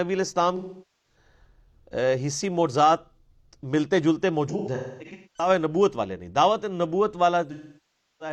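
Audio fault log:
0.56–1.16 s: AAC frame loss with concealment. About 0.47 s of lost audio is filled with a smeared, phasey repeat of the last good spectrum that fades down and back, not a clean cut to silence.
4.48–5.49 s: AAC frame loss with concealment. Losses totalling 0.64 s are scattered over about 0.85 s, the longest run around a third of a second, giving intermittent noisy, washed-out patches instead of one gap.
7.52–8.32 s: AAC frame loss with concealment. About 0.68 s of lost audio runs to the end of the clip, so the smeared fill decays toward silence with no recovery.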